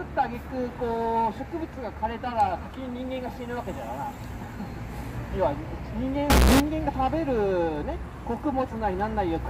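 From 6.30 to 6.60 s the sound turns abruptly loud, harsh and nearly square-edged: float read as integer, likely 32-bit float samples decoded as 32-bit integers.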